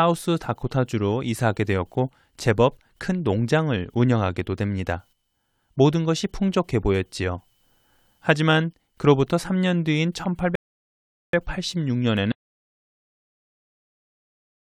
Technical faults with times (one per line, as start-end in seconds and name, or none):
10.55-11.33 rebuffering stall
12.32-14.75 audio dropout to silence